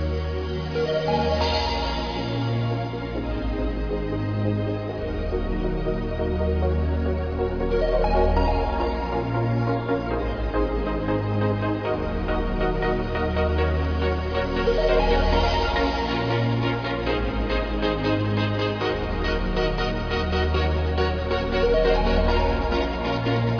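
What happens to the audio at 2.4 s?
Nothing goes wrong at 2.4 s; the audio plays through that moment intact, with no dropout, click or distortion.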